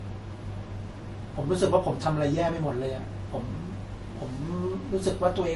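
Throughout the speech, the top end stops at 11.3 kHz and the smearing and swirly artefacts of two different codecs are heard together, likely from transcoding between lossy codecs, which fits MP3 near 48 kbit/s re-encoded as Vorbis near 39 kbit/s. A spectrogram shows a flat ceiling with patchy, speckled high bands.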